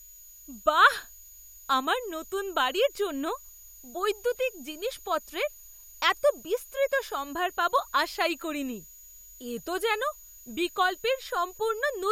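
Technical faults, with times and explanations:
Throughout, switching supply whistle: a thin, high whistle sits under the speech at about 7 kHz, wavering between 6.75 and 6.82 kHz, roughly 25 dB below the voice. A switching power supply running in an audible burst mode or beating with another one is leaking its cycling into the audio.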